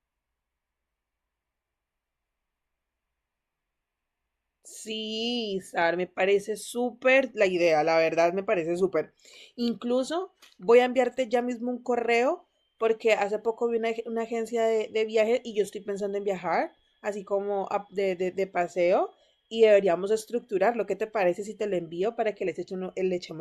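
Listening through the speech, nothing stood out as a technical fault at any point.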